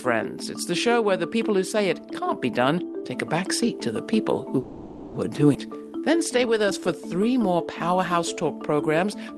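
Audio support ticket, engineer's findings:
Call audio freeze, 4.59 to 5.16 s: packet delivery likely stalled and the jitter buffer ran dry. Receiver extended the last sound for about 0.55 s as a fading buzz or hiss, then resumed where it left off. Nothing lost, only delayed.

Skip ahead, 5.54 to 5.57 s: a stretch of audio dropped in transit or by jitter buffer overflow while later audio was waiting. Roughly 0.2 s of sound discarded. Playback jumps forward with an almost seamless splice across the gap.

Jitter buffer slow-down, 5.66 to 7.35 s: buffer running low or raising its target delay, rebuilding its reserve by repeating single pitch periods. Playback at 90% speed, 172 ms added, pitch unchanged. Sounds are drawn out over the Opus call path.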